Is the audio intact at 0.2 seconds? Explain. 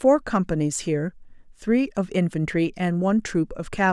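Yes, the speech at 0.2 seconds plays through cleanly, with no dropout, click, distortion or other fault at that moment.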